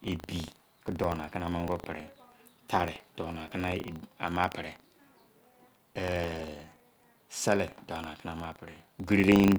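Buffer tearing runs through the whole speech clip. Writer and reader pointers have slipped, splicing a sliver of older audio into each period. It rattles at 25 Hz.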